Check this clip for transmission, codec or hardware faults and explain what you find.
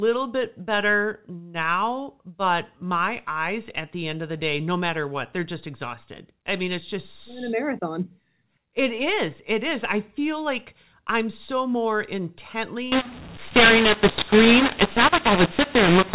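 One codec fault appears near the end. From 12.92 s to the end, the speech turns harsh and gritty, with levels jumping oddly and the pauses filling with hiss instead of dropping to silence. This is mu-law and A-law mixed up: the G.711 telephone stream, band-limited below 4 kHz, was encoded as A-law but is being decoded as mu-law. Each 8-bit code is mapped through the wrong logarithmic curve, so some samples come out too loud, others too quiet, and the quietest codes are lifted well above silence.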